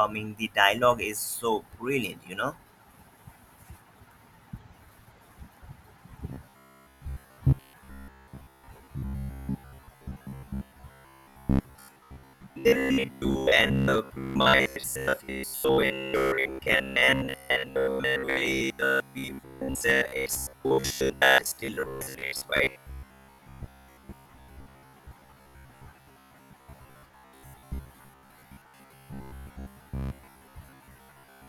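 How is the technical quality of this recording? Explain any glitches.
The technical quality is poor from 6.3 s to the end of the recording.

From 6.3 s to 31.48 s there is robotic sound from repeated short buffers. The voice becomes a rigid, metallic buzz near 66.8 Hz. That pitch fits a repeated chunk of about 15 ms. The likely cause is audio arriving too slowly, so playback loops the last fragment while real audio is skipped. Most of the sound is repeated rather than new. The speech still roughly follows its original shape.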